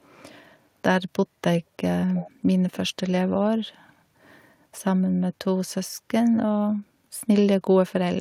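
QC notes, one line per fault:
2.08–2.31 s, echo leak: a faint delayed copy of the speech appears for about a quarter of a second, trailing the original by roughly 306 ms and sitting around 20 dB below the direct signal. The likely cause is a far end playing the call over a loudspeaker, where the echo canceller failed to fully subtract what its microphone picked up. That residue is returned down the line, so the talker's own speech comes back late and quiet.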